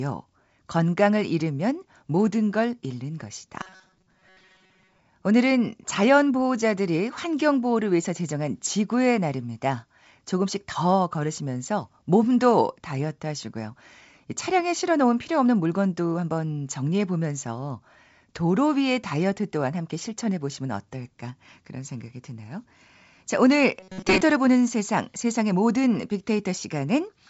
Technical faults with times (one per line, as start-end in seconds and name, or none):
3.61-4.99 robotic sound from repeated short buffers
23.80-24.21 robotic sound from repeated short buffers